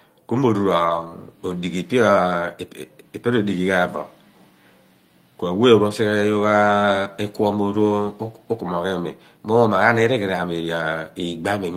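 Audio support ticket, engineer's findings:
Lost packets rebuilt from error correction, 0.85 to 1.07 s. No dropout, but about 120 ms of speech goes grainy and noisy. Opus decoder playing the low-bitrate backup copies carried in the following packets, consistent with six 20 ms frames lost. Jitter buffer or network side. Worth checking loss stats around then.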